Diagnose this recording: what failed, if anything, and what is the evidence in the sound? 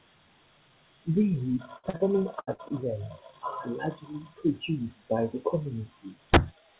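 The network dropped audio in three bursts of packet loss, at 1.78 to 1.85 s, 2.40 to 2.49 s and 2.53 to 2.60 s. About 60, 80 and 60 ms of speech are missing. The receiver stretched the last sound to cover each gap. It lowered that sound as it went, so a voiced sound thins into a held buzz and an unvoiced one into a fading hiss. The speech then resumes further on.

Two short concealed packet losses fall between those bursts, at 1.89 to 1.95 s and 1.97 to 2.02 s. This is again a network fault, handled by the call processing. About 40 ms and then 20 ms never arrived in time. The decoder rebuilt each hole from the preceding pitch or from shaped noise. It then blended back into real audio. Each is heard as a brief smear or wobble, and a consonant can disappear.

At 6.34 to 6.37 s there is a violent crack from integer overflow. This is a sample-format or gain stage fault. The signal was pushed about 9 dB past full scale. 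Instead of clipping, each peak over the limit wrapped round to the opposite sign and jumped across the whole range. That is why the crack sounds far harsher than clipping. Everything above 4 kHz is missing throughout, which matches G.711 A-law at 64 kbps.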